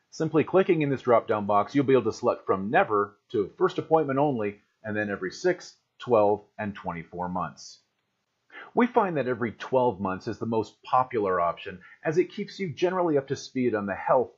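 No technical faults can be heard in this recording.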